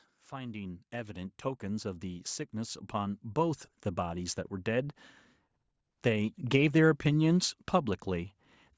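Automatic gain rising runs from 0.29 to 3.69 s in this speech recording. The gain control judged the input too quiet and lifted its level by about 11 dB over those three-plus seconds, so the voice and the background noise swell together. The call's microphone processing leaves nothing above 8 kHz.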